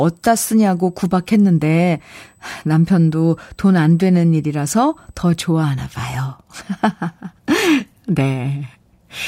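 From the start to 5.51 s, a USB whine of fixed pitch sits under the speech. It comes from current drawn in 125 microsecond microframes, which gives a tone at 8 kHz, strongest at its 16 kHz harmonic. It leaks in through power or ground, roughly 40 dB below the signal.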